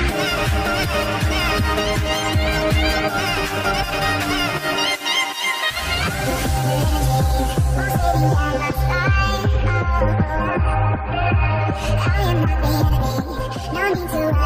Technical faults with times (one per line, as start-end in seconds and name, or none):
none